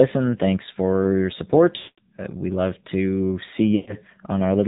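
The whole clip carries the AMR narrowband mobile codec. Nothing above 4 kHz survives. The speech sounds buzzy and synthetic, with plainly audible damage, which fits a low 7.4 kbps mode. Too few bits describe each frame's pulses and vocal tract shape.

Lost AMR speech frames come next, from 1.78 to 2.00 s. About 200 ms of frames failed. The decoder repeats the last good settings with falling gain, so the sound smears and fades out. Speech then returns weak or rough. A shorter run follows at 3.76 to 3.96 s, about 120 ms, with the same drawn-out fade.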